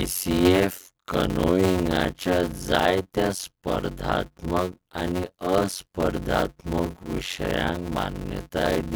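A speech recording with a block size mismatch (padded) running throughout: a buzz at about 92 Hz sits over the whole clip, and the speech plays at roughly 0.53 times normal speed while keeping its timbre. This fits 256-sample blocks being zero-padded into the larger blocks read by the next stage.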